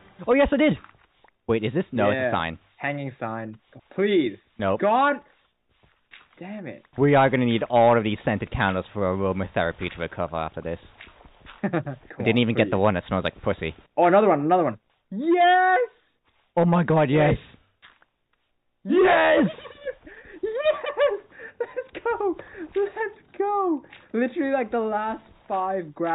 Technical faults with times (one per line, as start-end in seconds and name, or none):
none